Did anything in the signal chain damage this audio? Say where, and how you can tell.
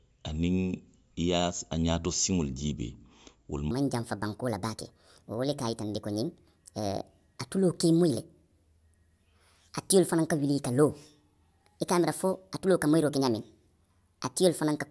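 Yes. From 3.71 s, right after "siŋolu jiibee wolu", the speech suddenly turns high and hurried through to the end, running 1.5 times too fast and about 7 semitones too high. That is a wrong sample rate at the playback or converter stage. Speed and pitch rise by the same ratio, which fits 16 kHz audio being clocked out at 24 kHz with no rate conversion.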